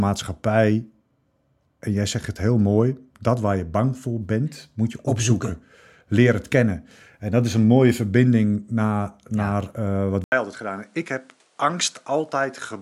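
At 10.24 s the recording path most likely switches its input to a poorer device, which stays in use to the end of the clip. After a short gap of about 80 ms, the speech comes back duller and narrower in band. It is also a few decibels quieter and has a new background noise of its own, roughly 35 dB below the voice. The change in tone, level and noise lands all at once rather than gradually.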